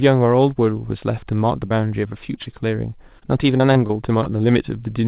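At 1.68 s, about 20 ms of the call failed to reach the decoder in time, a short concealed packet loss. The receiver covered the hole for roughly 22 ms by carrying the preceding sound forward, then blended back into the real signal. It is heard as a brief smear or wobble.

From 2.08 to 2.62 s, packets went missing repeatedly. This is repeated packet loss (robotic sound): four separate holes, the longest 26 ms, each patched by extending the last sound, with about 13% of the stretch concealed. From 3.19 to 4.38 s it recurs with five holes, the longest 22 ms, about 10% concealed. Both passages sound choppy, with fragments dropping out. Throughout, the audio stops at 4 kHz, which points to a narrowband call codec such as 64 kbps G.711 mu-law.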